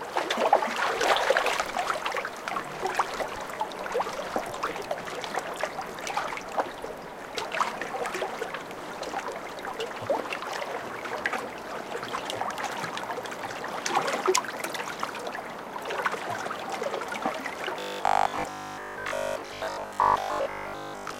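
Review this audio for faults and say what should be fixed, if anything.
From 17.8 s to 21.2 s the sound becomes a rigid, metallic 50 Hz buzz, robotic sound from repeated short buffers, likely from a 20 ms chunk being replayed over most of the real audio. A spectrogram shows evenly spaced 50 Hz harmonic lines, and the waveform shows identical blocks recurring. Enlarging the jitter buffer so new audio arrives in time would prevent it.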